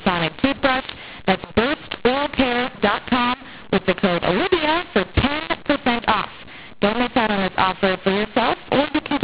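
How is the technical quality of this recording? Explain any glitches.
Not great, honestly. There's one fault, and it runs the whole length of the recording: a mu-law and A-law mix-up. The underlying telephone coding sounds like 8 kHz G.711 A-law, with nothing above 4 kHz, as you'd expect from that format.

The problem is the decoding. The speech was encoded as A-law but read back as mu-law. The two laws map their 8-bit codes to levels differently, so every sample lands at the wrong amplitude. Some come out too loud, others too quiet, and the quietest ones get pushed well above silence. That's why the speech sounds harsh and distorted throughout, and why the gaps between phrases are filled with noise instead of going quiet.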